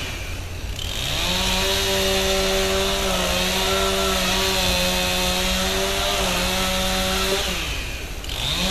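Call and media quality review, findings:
No audible faults found.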